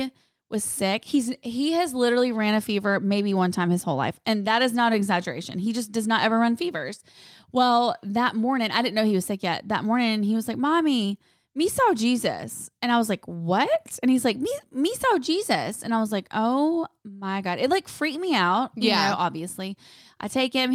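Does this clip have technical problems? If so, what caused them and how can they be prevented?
No, nothing stood out as a technical problem on listening to this speech clip, so there is nothing that needs preventing.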